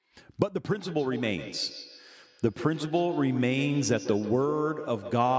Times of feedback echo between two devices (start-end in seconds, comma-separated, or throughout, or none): 0.68-5.38